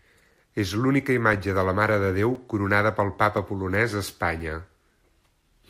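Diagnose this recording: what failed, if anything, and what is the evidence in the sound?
The fault is periodic USB or driver dropouts at the driver and buffer stage. Starting at 0.31 s and repeating every 1.02 s through about 5.4 s, the speech is cut by about seven brief gaps of a few milliseconds, each filled with silence and heard as a tick only while signal is present. A background task is stalling the USB bus or driver on a fixed timer. The strict clock-like spacing rules out network loss or load-driven underruns, which fall irregularly.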